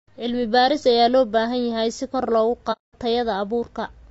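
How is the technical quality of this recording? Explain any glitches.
The recording has clearly audible codec damage across the whole clip and one dropout in the speech.

Low-delay AAC compression is the likely cause of the rough, grainy texture throughout. A low-delay coder such as AAC-ELD works in very short frames, which resolve the voice's pitch harmonics poorly. At a bitrate near 32 kbps it runs short of bits, so noise fills the gaps between harmonics and the top band sounds thin or synthetic. Unlike broadband hiss, this grain follows the voice and disappears in its pauses.

AAC frame loss with muting occurs from 2.72 to 2.95 s, just after "yahay si kor loogu". For about 210 ms, a length consistent with roughly seven lost frames, the decoder puts out silence in place of the missing spectrum. Overlapping windows fade the sound out and back in, so the hole has soft edges. That smooth fade, with no repeated or smeared sound, sets it apart from a hard digital dropout or from concealment that fills the gap.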